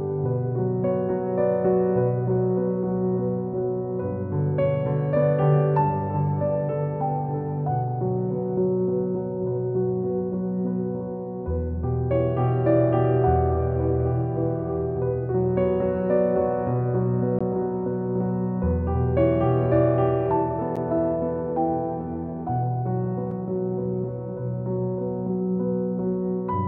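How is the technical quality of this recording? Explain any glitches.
There are three short dropouts late in the recording, all the same kind of glitch: a block of digital silence, at 17.39 s, 20.76 s and 23.31 s. In each one, a stretch of samples has been zeroed, probably because the output buffer wasn't filled in time. The gaps are about 18 ms, 10 ms and 2.7 ms long. The signal drops straight to zero and back with no fade. The first sounds like a brief hole, and the shorter two come across more as ticks.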